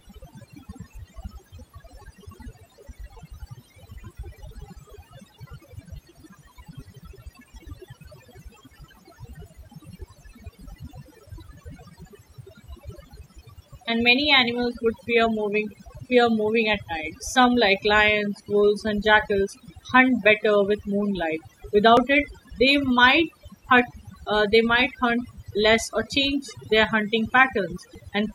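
Overdone noise removal affects the whole recording. Bands near the noise estimate are pulled far down along with quiet parts of the voice, leaving a near-silent background with twinkling specks. On a spectrogram, scattered isolated time-frequency dots appear among blank regions.

Short skips occur at 4.04, 10.02, 21.97 (just before "it they might") and 27.95 s, each losing roughly 20 ms. They are spaced at multiples of 6 s, so the likely cause is audio missing between chunks, with the two sides butted together. A waveform shows abrupt discontinuities there.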